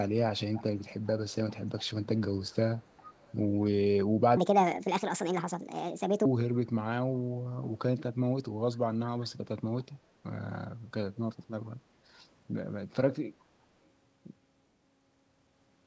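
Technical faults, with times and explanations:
0.53–0.84 s, 1.04–1.10 s, 1.50–1.88 s, 2.05–2.20 s, 2.45–2.56 s, 2.79–3.35 s and 8.73–8.77 s, echo leak: a faint copy of the speech trails the original by about 0.4 s, roughly 20 to 35 dB down, arriving in scraps. This is likely a far-end loudspeaker signal that the echo canceller failed to fully remove.
4.37–6.25 s, section at the wrong speed: the speech suddenly turns high and hurried, running 1.52 times too fast and raised by about seven semitones, because speed and pitch shift together. This likely comes from playing that stretch against the wrong clock.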